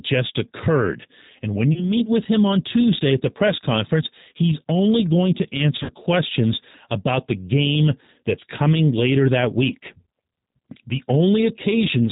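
Throughout, the speech passes through the G.729 codec, which rebuilds it from a vocal tract filter and sparse pulses at what sounds like 8 kbit/s, leaving it band-limited below 4 kHz, rough and synthetic. At 1.73 to 1.91 s, just before "with him on", VoIP packet loss concealed by the speech codec fills about 30 ms of missing audio, consistent with one lost packet. The decoder extrapolates a fading buzzy tone or coloured noise and recovers weakly. At 5.83 to 5.93 s, between "he's only going to" and "questions about the game", about 60 ms, suggesting two packets, is concealed the same way.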